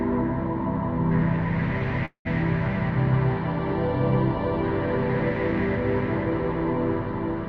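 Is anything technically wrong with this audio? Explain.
Yes, there is one fault. From 2.05 to 2.27 s, a call audio freeze: the last sound trails into a fading buzz, then about 100 ms of silence. The likely cause is a jitter buffer that ran empty. The audio then resumes intact, about 0.2 s late. On a spectrogram, smeared horizontal bands fade into a blank strip; the waveform decays to flat.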